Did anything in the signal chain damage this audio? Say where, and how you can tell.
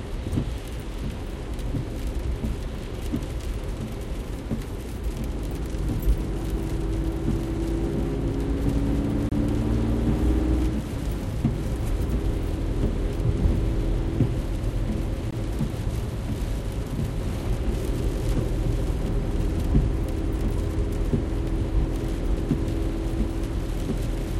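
Yes. A gap between stream segments occurs at the playback stage, with hard-edged silences at 9.29–9.32 s (about 27 ms) and 15.31–15.33 s (about 18 ms). They fall six seconds apart, which fits 6-second segments whose timestamps don't quite meet. The player pads each gap with silence, so nothing is lost.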